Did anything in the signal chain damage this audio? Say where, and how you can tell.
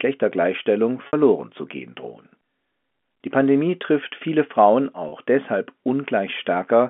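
Yes, at the network: packet loss with pitch repetition at 1.07–1.13 s (60 ms) and 5.09–5.12 s (30 ms). The concealment loops the last pitch period, giving a brief buzzy hold over the telephone-band speech.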